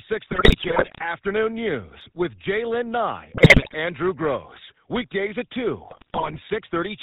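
Speech heard through a GSM full-rate codec for its whole length, with plainly audible coding damage. The voice has the gravelly, buzzy texture of a vocal-tract model driven by a regular pulse train that carries only a decimated excitation, and nothing survives above 4 kHz, so sibilants are dull and the top end is missing. The character fits the 13 kbps full-rate scheme. Three bursts of GSM bit errors break up the speech at 0.32 to 1.03 s, 3.32 to 3.75 s and 5.9 to 6.42 s. In each stretch the decoder is reading corrupted parameters. Wrong filter coefficients warp the spectrum, bad pitch values throw the excitation off, and damaged gain values make single frames jump in level. The result is squawks, pops and gargling lasting a few tenths of a second. The density of the damage points to a few percent of bits flipped, somewhat lighter in the last burst.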